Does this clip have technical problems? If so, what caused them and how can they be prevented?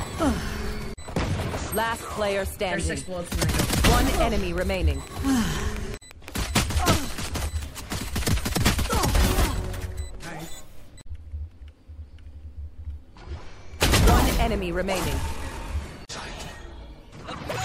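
Yes. From 3.56 s to 7.64 s a train of clicks ticks over the audio at a steady 5.9 per second, about thirty near-identical pulses that peak roughly ten decibels above the surrounding sound. The likely cause is interference from nearby equipment or a faulty connection or power supply injecting a repeating pulse. A waveform shows evenly spaced sharp spikes, and a spectrogram shows thin vertical broadband lines. Prevent it by moving cables away from noisy devices and checking the interface and its connections.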